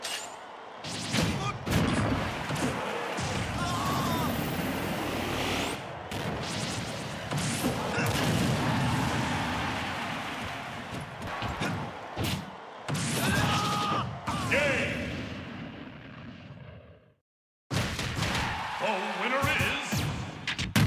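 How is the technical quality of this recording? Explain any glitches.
No technical glitches can be heard in this recording.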